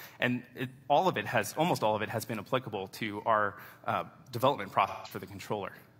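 AAC frame loss with concealment occurs at 0.74 to 0.84 s and again at 4.87 to 5.11 s. About 85 ms and 171 ms of audio went missing, which fits two and then four lost frames. The decoder patched each gap from the last good spectrum, leaving an artificial stretch in place of the real sound.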